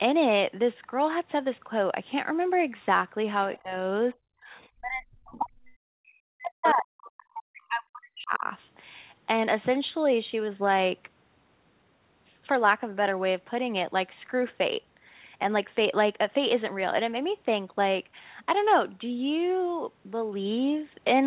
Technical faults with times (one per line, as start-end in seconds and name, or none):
3.55-3.59 other side's voice leaking through
3.62-3.73 speech suppressed in double talk
4.13-5.62 speech suppressed in double talk
4.54-4.69 other side's voice leaking through
5.31-5.39 other side's voice leaking through
5.95-8.44 speech suppressed in double talk
6.65-6.73 other side's voice leaking through
7.04-7.11 other side's voice leaking through
8.24 skip ahead
9.30-10.77 jitter buffer speed-up